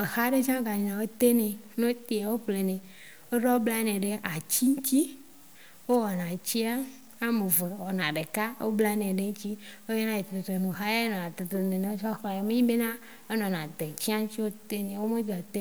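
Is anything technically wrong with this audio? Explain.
Yes. Throughout the speech there is a grainy, fizzy distortion that tracks the voice, roughening quiet syllables and sitting roughly 30 dB below the signal. This is likely low bit depth without dither: samples truncated to about 8 bits, so the rounding error follows the waveform.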